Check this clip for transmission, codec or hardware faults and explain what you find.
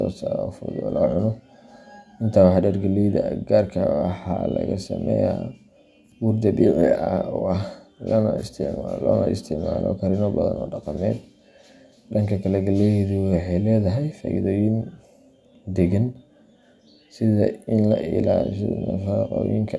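No transmission, codec or hardware faults are audible here.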